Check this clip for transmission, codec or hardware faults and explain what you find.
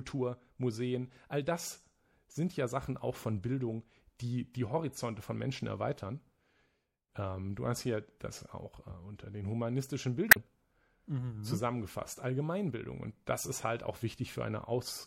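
Two faults are audible: a codec coloration across the whole clip, and one brief burst of corrupted data late in the speech.

Throughout, the sound is watery and swirly, with metallic chirping on sibilants. This is plainly audible and is likely MP3 compression at a low rate, fitting about 64 kbps. The encoder lets weak frequency lines flicker between frames. Unlike plain low-pass filtering, the texture shimmers rather than simply sounding muffled.

From 10.28 to 10.37 s, just after "äh unter den humanistischen", there is a short glitch. This is damaged data in a compressed stream: the decoder misread corrupted frames, lost sync and jumped to the next header. A dropout would simply leave silence, but this comes from misread frames.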